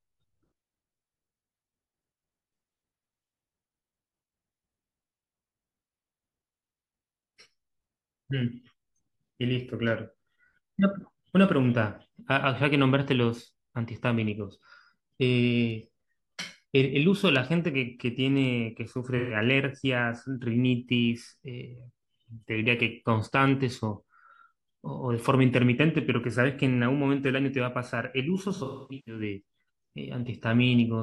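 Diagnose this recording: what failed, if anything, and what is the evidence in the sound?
Smeared, phasey patches at 19.17–19.36 s and, longer and broken up, 28.55–29.22 s: codec-stage AAC frame loss with concealment, the decoder refilling from the last good spectrum.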